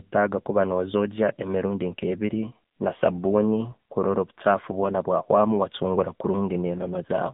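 From start to finish the speech carries AMR narrowband mobile codec damage. Nothing passes above 3.8 kHz, and the band sits near 150 Hz to 3.7 kHz. The pulse-driven vocal model sounds buzzy and synthetic, which fits a low mode near 8 kbps.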